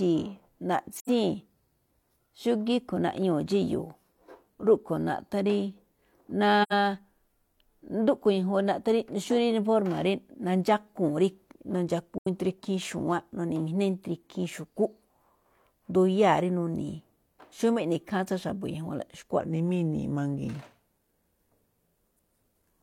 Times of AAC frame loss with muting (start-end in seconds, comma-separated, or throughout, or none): 0.97-1.09, 6.62-6.73, 12.18-12.27